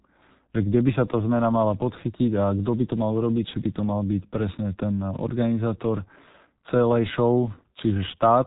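From the first moment to the last, the speech carries the sound of the G.723.1 codec, and it's heavily damaged. Nothing gets through above about 3.8 kHz, so everything sits muffled and boxed-in. The coder works in 30 ms frames and only refreshes its model of the voice slowly, which leaves a hoarse, rough texture and smears the consonants together. That level of thinning fits a very low bitrate, around 6 kbit/s.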